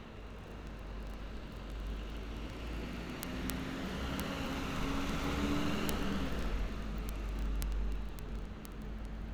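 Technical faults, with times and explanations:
0.11–9.32 s, word clock ticks: a steady rattle of sharp little ticks, roughly every 30 ms, a few hundred of them across the sound. The receiving end is running on its own clock rather than locking to the sender's, and the two drift apart by something like 700 ppm. Each time they slip past each other, a single sample gets dropped or doubled, and that tiny discontinuity is what you're hearing as each tick.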